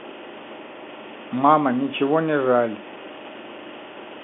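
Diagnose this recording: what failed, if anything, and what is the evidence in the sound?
Nothing failed: the speech sits in the ordinary G.711 telephone band of about 200 Hz to 3.5 kHz, as expected from a 64 kbps mu-law phone line, and no stage from wiring to playback shows a defect.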